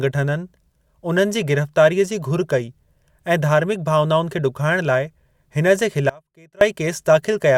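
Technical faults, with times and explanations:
6.09 to 6.61 s, audio dropout to a faint residue: the signal path likely lost its source for about half a second, around 517 ms, while the chain after the break stayed live. The speech cuts out abruptly in mid-flow, and the gap holds only faint sound, roughly 25 dB below its normal level, before returning just as suddenly. The hard edges at both ends set it apart from a natural pause or a fade.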